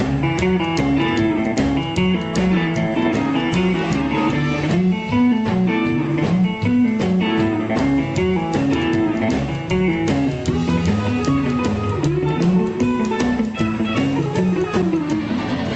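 Nothing here needs fixing: it's just audio carried over a call connection, with the highs rolled off above about 8 kHz by the call codec.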